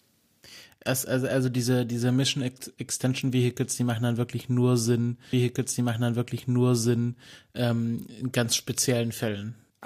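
At 5.33 s the speech jumps back and a stretch of about 2 s plays again, lasting until 7.31 s. This is a stream segment repeated. The player queued or fetched the same chunk of the stream twice, so it was heard a second time. A small blip marks the jump back. The programme then runs on, with "ähm in ganz" following the repeat. The clip is now roughly 1.98 s longer than it should be.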